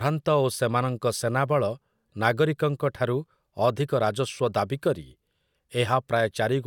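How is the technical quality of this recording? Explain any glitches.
The technical quality of the recording holds up, with no glitches to explain.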